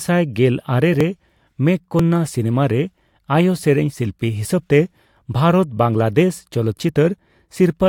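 From about 1.0 s to 6.9 s there's a tick roughly every 0.99 s, about seven in all. These are periodic USB or driver dropouts: something keeps stalling the bus or driver, and each time around 10 ms of speech gets skipped outright, so you hear a small regular click wherever the speech is running.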